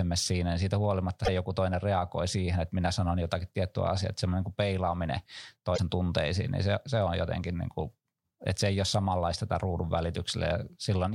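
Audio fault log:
1.22–1.29 s and 5.74–5.79 s, damaged data in a compressed stream: brief glitches of about 70 ms after "siinä niin siitä" and 56 ms after "että semmoinen niin peilaaminen". Corrupted bytes made the decoder misread frames and lose sync until it found the next valid header.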